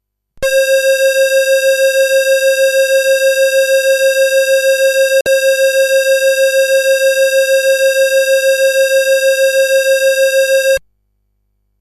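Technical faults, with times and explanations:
5.21 to 5.26 s, digital broadcast dropout: the sound ducks out for a moment, fading down in about 3 ms rather than clicking off, then comes back. Roughly 48 ms of programme is simply gone, which points to a couple of bad frames. The receiver couldn't decode them, probably from a checksum failure or a brief signal loss, so it muted until clean frames arrived. Nothing was patched in to cover the gap.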